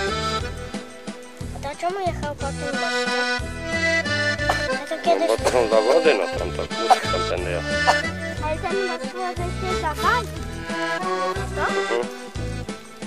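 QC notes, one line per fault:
Nothing stood out on listening.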